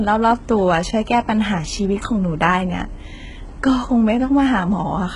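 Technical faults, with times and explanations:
Throughout, HE-AAC compression: the speech is likely heavily coded with HE-AAC at a rate around 12 kbps. The treble stops at 11.1 kHz and is copied up from lower bands, so s sounds turn gritty and metallic rather than simply dull as a plain low-pass would leave them.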